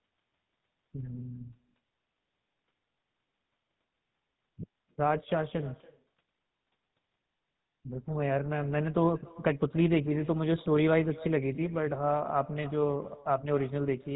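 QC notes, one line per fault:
Throughout, echo with no canceller. Every phrase returns roughly a third of a second later as a faint copy, about 23 dB below the speech. The far end's loudspeaker feeds its own microphone and nothing removes it, so the copy sounds thin.
Throughout, GSM full-rate codec. The speech has a buzzy, gravelly roughness and nothing above 4 kHz. The codec rebuilds the voice from a vocal-tract model driven by sparse, regular pulses, which fits a 13 kbps full-rate stream. The damage is plainly audible.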